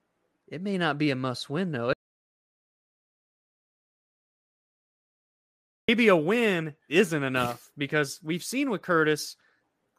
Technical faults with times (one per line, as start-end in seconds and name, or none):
1.93-5.88 audio dropout to silence